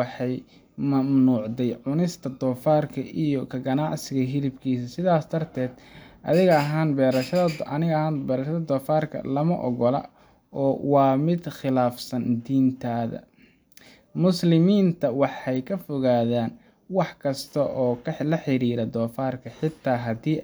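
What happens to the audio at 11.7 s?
Nothing goes wrong at 11.7 s; the speech carries on intact through that moment with no dropout, click or distortion.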